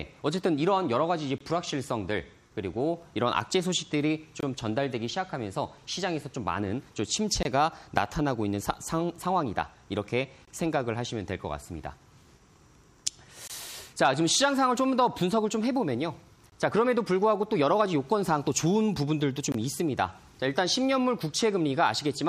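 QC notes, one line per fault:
1.38–1.41, 4.41–4.43, 7.43–7.45, 10.45–10.48, 13.48–13.50, 16.50–16.52, 19.52–19.54 s, gap between chunks: the audio is arriving in 3 s chunks with roughly 23 ms of silence dropped in at each join. Nothing's missing, but the sound gets briefly cut off at every boundary, so you hear a short hole about every three seconds.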